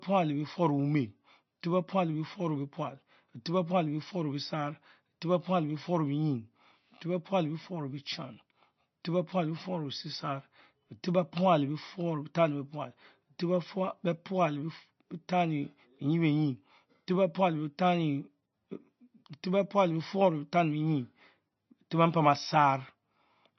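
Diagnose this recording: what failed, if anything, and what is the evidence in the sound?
Dull, watery speech throughout, with nothing above 5.9 kHz and plainly audible swirl: likely MP3 compression at the codec stage, which fits a bitrate near 31 kbps.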